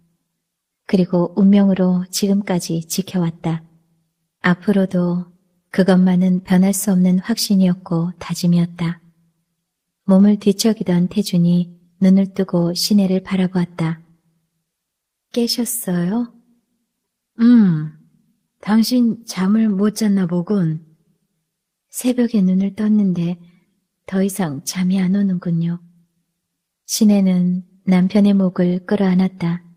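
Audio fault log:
No faults are heard anywhere in this clip.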